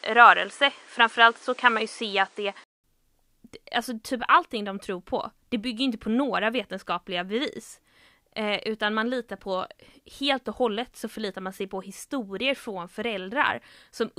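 From 0 to 2.84 s the speech sounds dull and boxy. Nothing reaches above 10.5 kHz. A faint noise floor sits beneath it. The level is slightly off. A 200 ms silence follows, then the sound clears. Likely cause: input switched to a poorer device.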